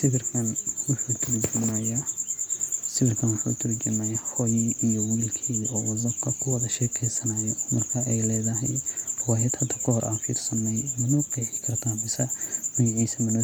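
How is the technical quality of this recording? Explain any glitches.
Nothing in this recording stood out as a technical problem on listening.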